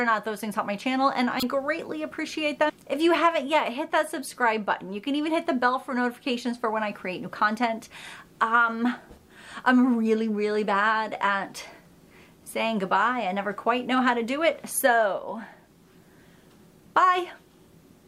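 At 1.40 to 1.43 s there is a corrupt frame decoded: a brief chirp-like burst, peaking at about -10 dBFS, that sits over the sound for roughly 30 ms. Damaged bits in a couple of compressed frames were decoded as if valid, so misread gains and codes placed energy at frequencies where none belonged. Unlike a dropout or concealed packet loss, foreign tonal or noisy content is added, lasting about as long as the affected frames.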